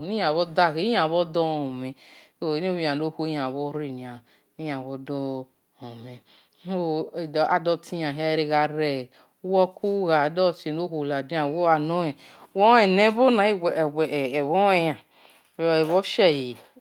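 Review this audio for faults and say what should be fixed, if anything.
No faults turn up in this audio, so nothing needs to be fixed.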